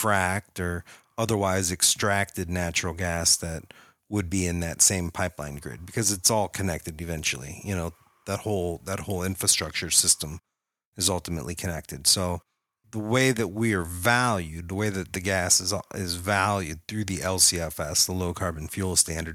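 Speech recording with no technical faults to report.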